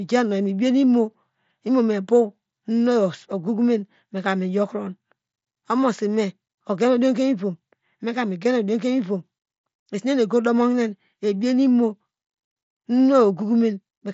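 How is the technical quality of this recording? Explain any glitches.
Nothing in this speech recording stood out as a glitch or technical problem on listening.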